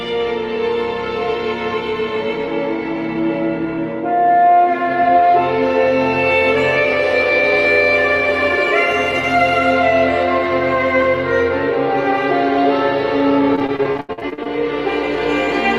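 From 13.55 to 14.47 s, repeated packet loss (robotic sound) sets in. Packets keep going missing, more than a dozen holes with the longest about 82 ms, and each is patched by extending the previous sound, so roughly 38% of that stretch turns choppy.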